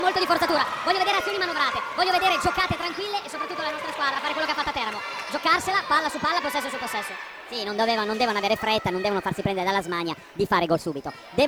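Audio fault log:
throughout, wrong sample rate: the audio is played back faster than its recording rate with no conversion, consistent with 32 kHz material running at 44.1 kHz. Speed rises 1.38 times and pitch about 5.6 semitones together, so everything sounds high and hurried.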